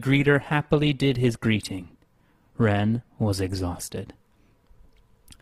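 From 0 to 3.92 s, the speech plays as an adaptive stream starting at a low bitrate. The treble is thin and smeared, with strong codec artefacts, consistent with roughly 16 kbit/s Opus. At 3.92 s quality jumps without a gap, suggesting a step to about 64 kbit/s.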